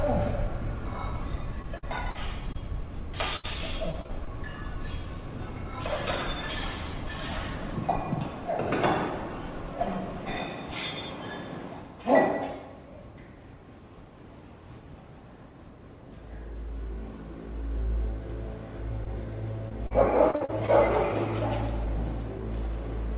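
From 1.62 to 2.56 s and again from 3.36 to 4.28 s, repeated packet loss (robotic sound) breaks up the audio. Four and then five gaps, the longest 72 ms, are each patched by extending the preceding sound, which gives a choppy sound with pieces missing. On a spectrogram these stretches show short, smeared, repeated frames between abrupt edges, all under the 4 kHz ceiling of the call path.

At 19.04 s a short concealed packet loss of about 20 ms passes as a brief smear or wobble. The waveform shows a tiny bridged segment that continues the previous sound before blending back in.

From 19.69 to 20.70 s the repeated packet loss returns, with six gaps of up to 52 ms concealing about a fifth of that span.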